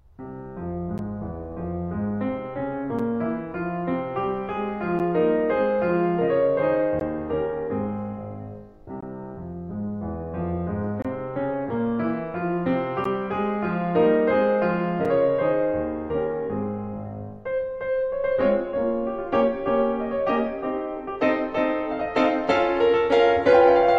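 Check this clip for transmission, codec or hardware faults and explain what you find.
The music has one recurring transmission fault. A gap between stream segments occurs at 0.98, 2.99, 4.99, 7.0, 9.01, 11.02 to 11.05, 13.04 and 15.05 seconds, each landing at a boundary of the 2-second segments. The timestamps of neighbouring segments don't quite meet, so the player pads the difference with silence, inserting 5 to 24 ms each time. Each gap is heard as a brief, hard-edged dropout in the music, repeating about every two seconds, with nothing missing on either side.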